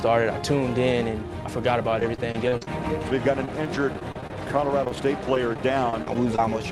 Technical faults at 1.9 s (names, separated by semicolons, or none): repeated packet loss (robotic sound)